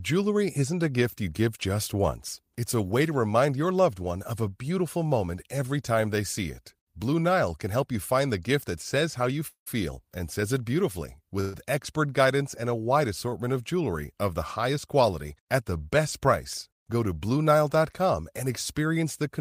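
A call audio freeze hits at 9.47–9.68 s, right after "that says how you", and again at 11.41–11.56 s, after "and says it beautifully". Packets were likely held up, emptying the jitter buffer. The receiver extends the last sound as a fading buzz, reaching silence for about 0.1 s in the first case. Speech then resumes where it left off, so nothing is lost but gaps of about 0.19 s and 0.13 s are inserted.

A short stall from a late packet follows at 13.29–13.34 s, after "guidance and a wide". One packet missed its slot, so the receiver stretched the preceding sound by 24 ms until the packet arrived, leaving a briefly held syllable with a faint buzz.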